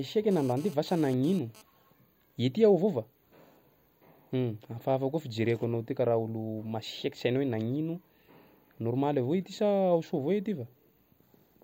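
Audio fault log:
0.31–1.62 s, GSM phone buzz: a raspy 217 Hz buzz, about 23 dB under the speech, from a nearby phone's bursting radio getting rectified, comes and goes with data.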